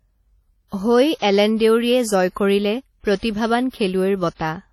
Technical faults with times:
0.00-4.73 WMA compression

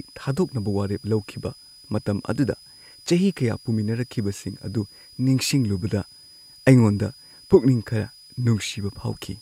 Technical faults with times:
0.00-9.41 switching supply whistle

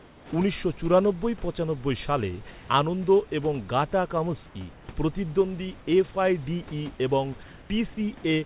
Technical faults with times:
0.00-0.32 comfort noise in place of the background
2.51-2.69 comfort noise in place of the background
4.73-4.88 comfort noise in place of the background
7.43-7.70 comfort noise in place of the background

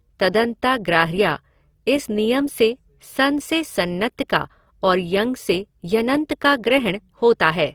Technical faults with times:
0.00-7.75 Opus compression

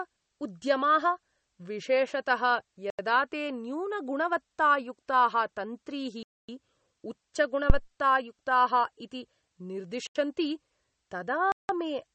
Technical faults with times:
0.00-12.15 MP3 compression
2.90-2.99 block of digital silence
6.23-6.49 block of digital silence
7.70-7.82 phantom power thump
10.07-10.15 block of digital silence
11.52-11.69 block of digital silence

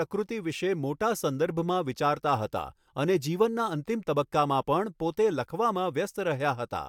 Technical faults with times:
none

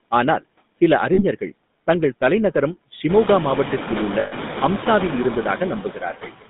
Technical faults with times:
0.00-6.50 noise suppressor artifacts
0.00-6.50 GSM full-rate codec
1.14-1.21 lost GSM frames
4.20-4.33 lost GSM frames
5.83-6.32 speech cut by the noise suppressor

